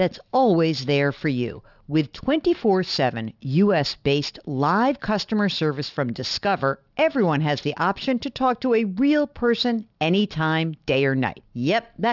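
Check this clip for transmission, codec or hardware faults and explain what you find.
The speech shows aliasing from start to finish. The audio appears to have been resampled to a lower rate without an adequate anti-aliasing filter, and the fold point sits at 6 kHz, which fits a new sample rate of 12 kHz. Content that was above 6 kHz has mirrored back down into the band as unrelated, inharmonic tones around 20 dB below the speech. Sibilants sound gritty and metallic, and the spectrum runs right up to the 6 kHz edge.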